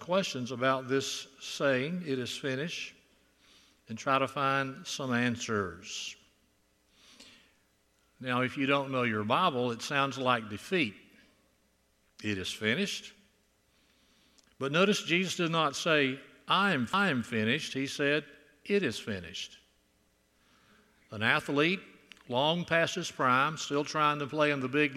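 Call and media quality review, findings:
CD skip at 16.93 s. Quick tick, then the audio picks up from a different spot, with a very brief mute of a few milliseconds before it. Probable component: disc transport and pickup. The laser got knocked or hit a flaw, lost its track, and landed on another turn of the spiral, so the continuity breaks.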